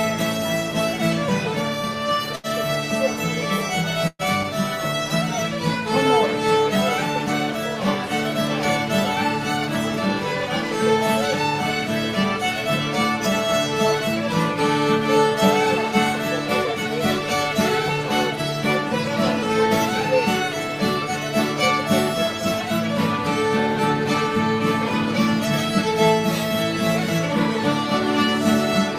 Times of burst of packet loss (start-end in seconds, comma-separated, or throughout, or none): 2.35-2.46, 4.07-4.22